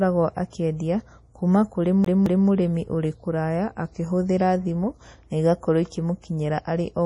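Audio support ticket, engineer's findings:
Whole clip: treble gone above 10.6 kHz, watery, swirly speech, smeared consonant attacks, heavy damage. Likely MP3 compression starved of bits, around 32 kbps by the sound; encoder lowpasses and drops weak spectral lines frame to frame.

2.05 to 2.48 s: fast even stutter, same 0.22 s chunk replayed twice with brief mutes at the jumps. Classic CD stuck on one turn; scratch kicks the laser back a track at the same spot each revolution.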